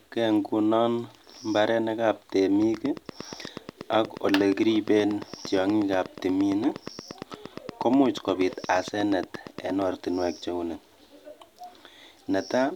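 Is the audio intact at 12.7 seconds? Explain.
Yes, at 12.7 seconds the audio is intact, with no dropout, click, distortion or other fault audible at that moment.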